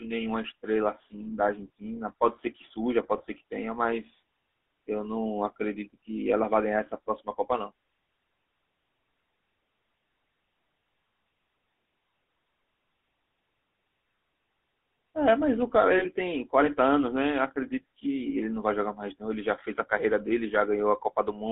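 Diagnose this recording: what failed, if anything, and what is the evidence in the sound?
At the codec stage, the audio runs through a GSM full-rate codec for its whole length. The speech is confined to roughly 250 Hz to 3.4 kHz and carries a plainly audible buzzy, gravelly roughness. That roughness comes from pulse-driven excitation feeding a vocal-tract model, which fits the 13 kbps full-rate coder.

At the transmission stage, there are lost GSM frames at 3.18 to 3.22 s and at 15.98 to 16.06 s. Each gap is bridged by a brief rough, metallic ring as the decoder repeats the last good frame's settings. The gaps sound consistent with about 20 ms and 40 ms of missing data.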